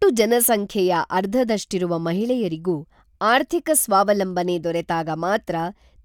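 Nothing in the recording stood out as a technical problem on listening.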